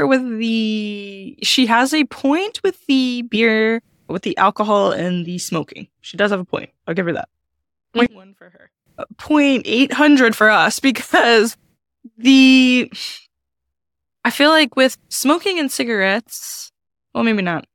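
Speech that, from 8.06 to 8.86 s, drops by about 28 dB into a faint residue where the centred voice nearly disappears. The likely cause is one channel inverted: with one side's polarity reversed, the shared centre content cancels when summed to mono.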